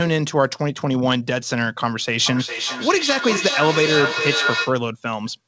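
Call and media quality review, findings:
Speech returning in thinning, ringing repeats roughly every 0.4 s, 2.26–4.85 s, peaking about 3 dB under the talker. Feedback echo between two devices: second endpoint's speaker re-captured by first's mic, outside either echo canceller's reference.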